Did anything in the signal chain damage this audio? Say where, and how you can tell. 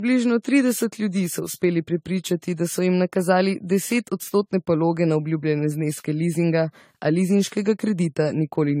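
Yes, at the codec stage, across the whole clip the speech sounds swirly, hollow and smeared, with blurred consonant attacks and no content above 16.5 kHz. The likely cause is generation loss from about ten AAC-LC re-encodes at a rate near 64 kbit/s. A spectrogram would show a hard ceiling and accumulated holes.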